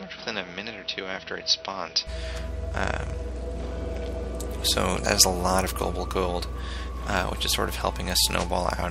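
From the start to 2.07 s the sound is dull and boxy, with nothing above 5.9 kHz, a level some 5 dB lower, and a faint new noise floor well below the signal. It clears with no gap, so the input likely switched to a poorer device with a narrower band.

Between 2.53 and 4.48 s the treble thins out and a gritty, grainy noise rises, then clears. This fits a Bluetooth SBC bit pool drop, from about 28 down to 13, or roughly 100 kbps. With so few bits, the top sub-bands get few or no bits and the rest are quantised coarsely.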